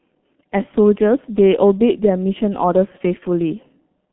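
Throughout, the speech went through the G.723.1 codec, consistent with roughly 6 kbit/s. The band is cut to 150 Hz to 3.4 kHz, leaving it muffled, hoarse and smeared at consonants.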